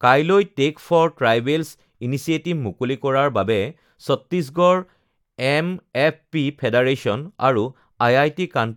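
No audible faults detected.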